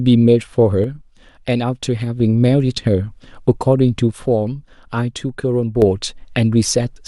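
A speech clip with two abrupt level drops of about 6 dB, from 0.84 to 2.20 s and from 4.11 to 5.82 s, each recovering suddenly. The likely cause is one channel dropping out, halving the shared signal in the mono sum.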